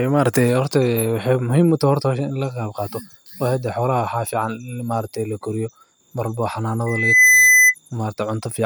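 Loudspeaker feedback squeal, 6.86 to 7.75 s: the microphone re-captures its own loudspeaker, and a 2 kHz tone swells within about 0.4 s, rising well above the speech.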